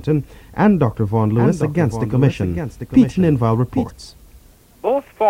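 From 1.35 to 3.9 s, a doubled audio track: a clean copy trails about 0.7 s behind, around 10 dB quieter, starting and stopping abruptly. Likely a second capture path or misaligned edit.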